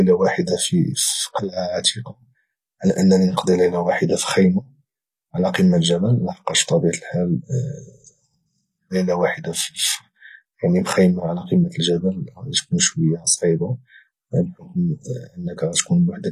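Throughout, s sounds are gritty and lispy with nothing above 14.9 kHz, likely from HE-AAC compression rebuilding the treble from lower bands at a low bitrate.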